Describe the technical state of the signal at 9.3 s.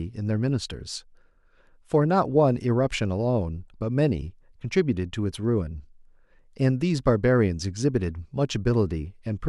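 At 9.3 s the speech signal is intact, with no audible technical fault at that moment.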